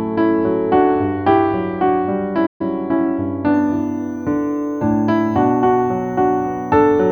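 At 2.46 s the sound cuts out abruptly and stays silent until 2.61 s, a gap of about 135 ms, before carrying on. This is a playback stall: the output had nothing to play for that interval, most likely because the player's buffer ran dry or its audio thread was blocked and could not deliver samples in time. It is heard as a dropout in the middle of the flow.

From 3.54 s to the end of the clip a switching supply whistle is present: a thin high tone sitting roughly 40 dB below the programme. Its pitch wanders between about 6.0 kHz and 6.5 kHz instead of holding steady. That drift is typical of a switch-mode power supply running in an audible burst mode, whose switching rate shifts as the load on it changes, with the resulting tone leaking into the audio path.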